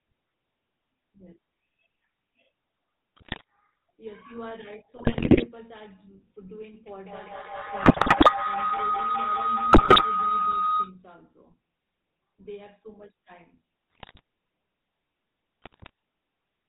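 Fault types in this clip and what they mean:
GSM full-rate codec: the old 13 kbps phone codec pulse-drives a vocal-tract model and cuts everything above 4 kHz, so this speech sounds buzzy and gravelly throughout.
GSM bit errors: corrupted bits hitting the decoder scramble filter, pitch or gain values, giving squawks and gargling bursts at 3.2, 5.0, 7.8, 9.7, 13.9 and 15.6 s.
Feedback howl: a mic-to-speaker loop gaining level each trip builds from 6.87 s into a howl around 1.5 kHz, with the loop repeating roughly every 200 ms, peaking about 16 dB above the speech until 11.02 s.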